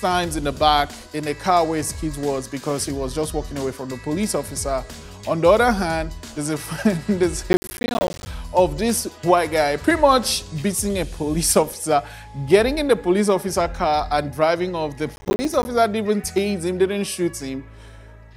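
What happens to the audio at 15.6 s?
A gritty burst of crackle tears through the sound from 15.16 to 15.65 s: processor overload crackle, with roughly twenty short buffers of about 10 ms each missed and dropping out as tiny silent gaps.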